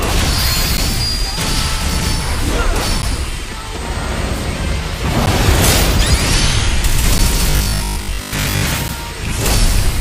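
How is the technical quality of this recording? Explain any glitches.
The recording has two recurring technical faults: short dropouts to silence and one stretch of robotic buzzing.

Blocks of digital silence occur at 0.77, 3.02, 5.26, 7.18 and 8.88 s. Each time, the output buffer likely went unfilled for 10 ms and was zeroed, so the sound cuts out abruptly and is heard as a tick or dip.

Robotic sound from repeated short buffers appears from 7.50 to 8.62 s, likely because audio arrived too seldom and 20 ms chunks were looped over most of that stretch. This forces a rigid, metallic 50 Hz buzz onto the sound.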